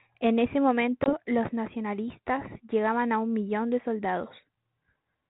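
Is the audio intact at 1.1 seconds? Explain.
No. From 1.04 to 1.14 s there is packet loss on an ADPCM call: a hard-edged silent hole about 20 ms long, roughly one packet, just before "los nacionalistas llegaban a". Unlike a plain dropout, the damage outlasts the gap. The G.726 decoder, running at 32 kbit/s, loses track of the sender's adaptive predictor and step size, so the speech returns slightly distorted before settling within some tens of milliseconds.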